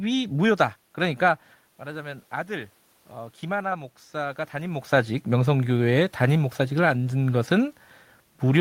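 From 1.79 s to 4.86 s the automatic gain rises. Just before this, at around 1.5 s, the talker moves back and the voice drops by about 12 dB. The gain control then slowly raises its level by about 5 dB over roughly three seconds. What sets this apart from the talker's own movements is that the room noise swells along with the voice. When the talker moves again near 4.5 s, only the voice changes.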